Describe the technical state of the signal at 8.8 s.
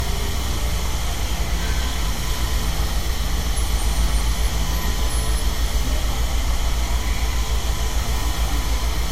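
At 8.8 s you're hearing the same thing that runs through the whole clip: low-bitrate audio saved at a high bitrate. There's nothing at all above about 16.5 kHz, plus the coding artefacts left by the first encoding on these everyday sounds. The likely story is an MP3 first squeezed hard, around 64 kbit/s by the sound of it, then re-encoded generously. The bigger second pass can't bring back what the first one threw away.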